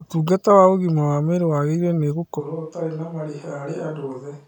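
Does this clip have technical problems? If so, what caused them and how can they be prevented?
Yes. From 2.42 s to the end, the speech suddenly sounds roomy and hollow. Bass thins out. The level drops by about 10 dB. Room noise sits only about 35 dB below the speech. The close signal has gone. This is likely a switch to a distant microphone, picking up more room sound. Monitor the close mic throughout and record it to a separate backup track.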